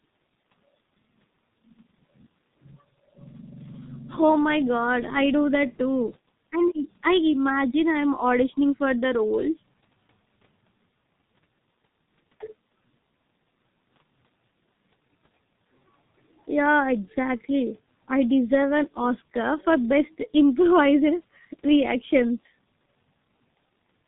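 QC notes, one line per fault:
Throughout: G.723.1 codec, heavy damage. The speech is muffled and hoarse from start to end. Nothing above 4 kHz comes through, so the upper band is simply missing. The codec works on 30 ms frames and updates its voice model slowly. Quick changes between sounds get smeared, so consonants blur into the vowels around them. The muffled, hoarse texture points to a very low bitrate, around 6 kbit/s.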